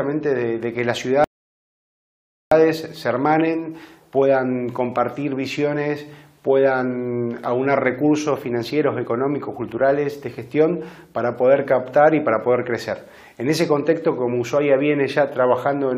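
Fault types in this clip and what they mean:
rebuffering stall: the player exhausted its downloaded audio and halted until more data arrived. At 1.24 s the sound drops to silence for about 1.27 s, then picks up at exactly the point it stopped at 2.52 s, so no material is lost, only time added.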